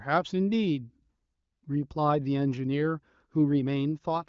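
Nothing goes wrong anywhere in this bit of speech; it comes through an AMR wideband (HD Voice) link at a rate that sounds like around 18 kbit/s, so there's just the usual top end that stops short of about 7.5 kHz and not a hitch to point at.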